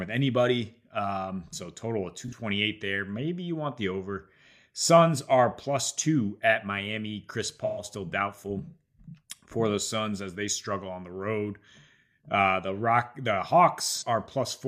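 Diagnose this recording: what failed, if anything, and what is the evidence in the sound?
Codec stage: AAC frame loss with concealment. The decoder rebuilt missing frames from the last good spectrum, leaving smeared, noisy patches at 2.28–2.33 s after "so total of", 7.64–7.84 s before "still doubtful", and 13.96–14.03 s.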